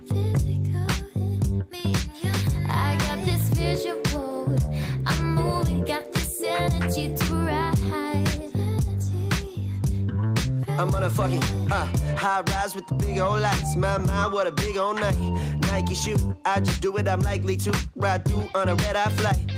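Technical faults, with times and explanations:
No technical faults are audible.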